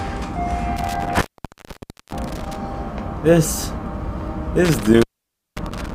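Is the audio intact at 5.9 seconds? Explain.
No. An intermittent contact from 4.65 s to the end opens the line for about 0.53 s. Unlike a clean digital dropout, the gap leaves faint hiss and crackle at its edges.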